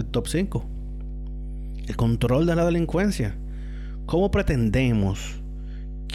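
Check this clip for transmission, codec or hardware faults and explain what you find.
One fault is present: mains hum runs underneath the speech from start to finish.

Mains hum, throughout: a ground loop or nearby transformer leaks the 50 Hz power line into the signal, giving a steady low tone around 10 dB below the speech.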